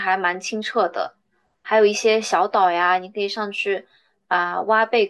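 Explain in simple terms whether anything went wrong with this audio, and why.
Nothing went wrong in this speech recording. Listening through it, there is no point where the sound shows a problem with how it was recorded, sent or played back.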